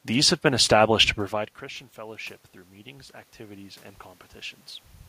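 A speech clip in which the talker pulls away from the microphone around 1 s, dropping the input by about 21 dB. Just after "have been established to", the automatic gain rising fault follows: from 1.31 to 3.91 s the gain control slowly adds about 6 dB, lifting the voice and room noise together. On a waveform the envelope ramps upward over those 2.6 s, and a spectrogram shows the noise floor brightening in step with the speech.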